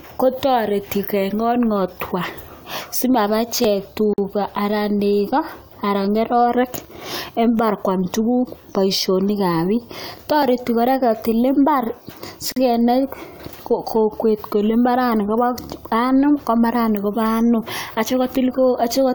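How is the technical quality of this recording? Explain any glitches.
The recording has three audible glitches in the speech: one click and two short dropouts.

At 3.64 s a single sharp click is heard. This is likely dropped samples: under a millisecond of the stream went missing, so the waveform leaps abruptly to a later value. Too little is lost to remove any sound, so only the click remains.

At 4.13 s and 12.52 s there are gaps at a join of encoded pieces. Separately encoded segments were spliced without trimming each encoder's start-up delay and final-frame padding. The result is a gap of about 47 ms and then 43 ms, its edges smeared by the codec so the silent part is shorter, after which the speech resumes where it stopped.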